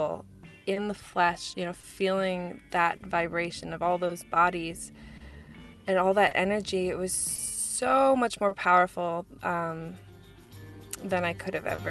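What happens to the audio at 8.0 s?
At 8.0 s the audio is inside a stretch of scattered short gaps running from 0.73 to 8.53 s. Lost or late packets were patched by extending the last sound, giving brief ticks or smears. These appear as frozen, stretched spectral slices and repeated waveform cycles.

Clock drift between sender and receiver runs throughout. The sender's clock is roughly 3% slow, so the jitter buffer keeps draining and short pieces get repeated, producing uneven stutters visible as duplicated waveform segments.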